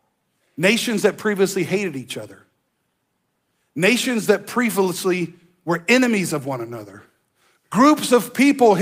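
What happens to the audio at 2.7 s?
Nothing goes wrong at 2.7 s; the audio plays through that moment intact, with no dropout, click or distortion.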